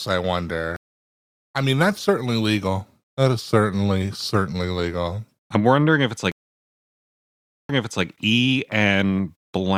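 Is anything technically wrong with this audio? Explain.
Yes. There are two stream reconnects. At 0.76 s the speech cuts to about 0.59 s of silence. It resumes roughly half a second further on, at "I mean that's certainly", so some speech is skipped. After "I'm wondering if it's", a longer gap runs from 6.32 s to 8.05 s. The speech then restarts 0.36 s earlier, so a short stretch repeats. Each time the connection dropped and the player went quiet. It then reconnected and started a new decoder partway through the stream.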